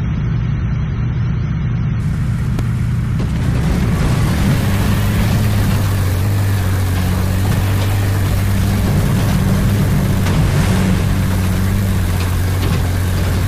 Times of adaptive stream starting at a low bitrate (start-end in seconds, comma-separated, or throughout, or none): 0.00-2.00